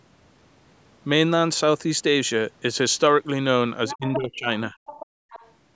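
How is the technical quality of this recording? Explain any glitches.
The last two seconds of this speech recording have echo-control problems. Faint leaked speech, dips in the talker's level, and a brief background dropout all cluster near the end.

Other side's voice leaking through appears from 3.88 to 4.17 s, 4.86 to 5.06 s, and 5.3 to 5.52 s. A second voice sits under the talker, fading from moderately quiet to faint. This is likely residual loudspeaker echo the canceller missed.

Speech suppressed in double talk occurs from 3.93 to 4.49 s and 4.69 to 4.75 s. The talker's level sinks, deeply at first and then briefly and more mildly. The likely cause is the canceller damping both voices during overlap.

Background gated by the echo canceller runs from 5.06 to 5.3 s. The room sound drops by about 29 dB. The canceller clamped the microphone while the loudspeaker played, then released it.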